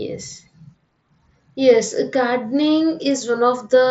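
No faults are present: the speech arrives through a wideband Bluetooth headset link using the mSBC codec, with its usual limit that nothing above about 7.7 kHz comes through and a light grainy coding texture on the louder sounds.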